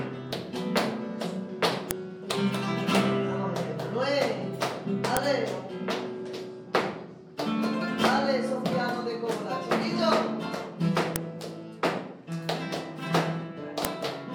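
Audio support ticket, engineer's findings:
Concatenation/streaming stage passing WAV headers through as sample data: file header played as audio. Header bytes at each segment boundary decoded as PCM, producing a brief, sharp, loud click independent of surrounding signal level. Four occurrences: 1.91 s, 5.17 s, 11.16 s, 13.85 s. Each is a single-instant snap, pointing to a new piece joined there without its header stripped. Probable component: the joiner or stream packetiser.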